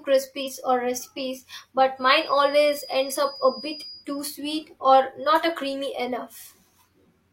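At 0.42 to 0.48 s, compressed frames were skipped, dropping about 50 ms of speech, so the audio jumps forward. From 1.95 to 4.08 s, a loudspeaker-to-microphone loop likely hovered at the edge of feedback, producing a thin, slowly swelling and fading 4.9 kHz feedback whistle around 20 dB below the speech.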